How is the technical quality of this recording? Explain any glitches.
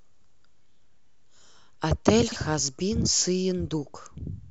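The speech has one glitch, from 2.28 to 2.36 s: a brief jumbled moment. It comes from chunks out of order. The audio is handled in 40 ms chunks, and one chunk arrived or was written one slot late, so it plays after the chunk that should follow it. Nothing is missing, but the two pieces are swapped, leaving three hard joins where the waveform jumps. The reversed order makes that instant sound scrambled.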